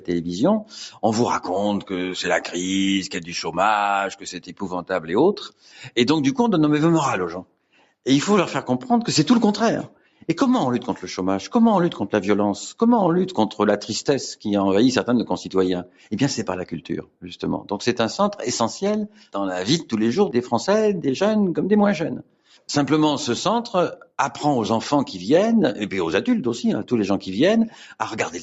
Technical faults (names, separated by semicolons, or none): noise suppressor applied to music or sounds; sound cut by the noise suppressor